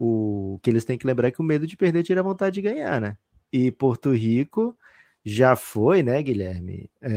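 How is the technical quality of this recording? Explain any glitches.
There is one glitch, at 0.58 s, a brief click from what is likely dropped samples. A handful of samples, a fraction of a millisecond, went missing, so the waveform jumps straight to a later value. Too little is lost to remove any speech, but the abrupt step produces a single sharp click that spreads across the whole spectrum.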